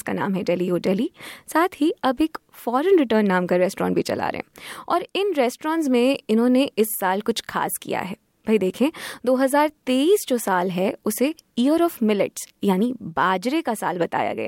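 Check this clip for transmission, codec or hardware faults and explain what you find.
The speech has one fault, overlapping chunks. At 7.46–7.48 s and 12.48–12.50 s, a 20 ms slice plays twice. Each 5 s chunk starts before the last one ends, so the joins repeat audio. Each join gives a brief click or stutter.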